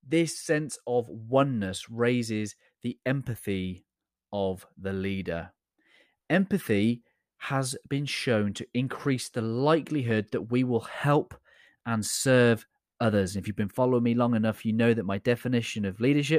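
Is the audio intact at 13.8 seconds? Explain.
Yes, the audio at 13.8 seconds is intact, with no audible fault at that moment.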